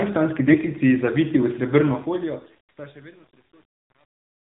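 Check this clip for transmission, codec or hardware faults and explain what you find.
Two faults are present: mobile-codec coloration throughout, and two brief bursts of AMR bit errors.

Throughout, the speech carries AMR narrowband mobile codec damage. Narrowband coding rebuilds the speech from a vocal-tract model and sparse pulses, and nothing above 4 kHz gets through. The low-rate sound fits the 7.4 kbps mode, plainly buzzy and synthetic. A spectrogram shows a hard ceiling at 4 kHz.

From 0.48 to 0.58 s, just before "zaviti v", and again from 2.34 to 2.49 s, there are AMR bit errors. Flipped, weakly protected frame bits misplace the excitation pulses and skew the gain and spectral values. Pitch and level roughly hold, but the speech turns hoarse, scratchy and gargly, more heavily in the first burst. A spectrogram shows smeared, noisy harmonics over those spans.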